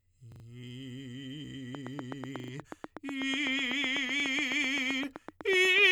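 At 0.32 s the music stutters: a repeated buffer fault, where fresh audio failed to reach the output in time and the device replayed its last block instead. The same 40 ms fragment sounds three extra times, which fits a 40 ms buffer, with a hard join at each repeat, until 0.44 s. Essentially no audio appears to be lost; the passage is simply delayed.

From 1.75 s to the end a train of clicks runs over the music: short, similar pulses at a steady pace of about 8 per second, peaking roughly 10 dB above the signal, heard as a regular ticking. The likely cause is interference from nearby equipment or a faulty connection injecting a pulse at a fixed rate.

The repeated buffer fault returns at 2.40 s, again a 40 ms piece played three extra times, ending at 2.52 s, and the ticking continues underneath it. At 4.20 s a single extra play of a 40 ms block gives a brief double hit that ends at 4.24 s.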